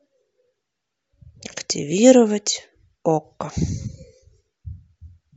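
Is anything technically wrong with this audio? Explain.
No, nothing is technically wrong with this speech recording. There is no problem here to explain.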